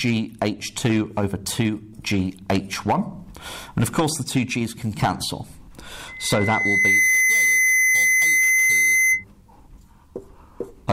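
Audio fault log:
6.08 to 9.24 s, loudspeaker feedback squeal: a steady 2 kHz tone swells up over about a second and then sits a few dB above everything else. The mic's hearing its own speaker, and at that frequency the loop gain tops one, so it keeps feeding itself.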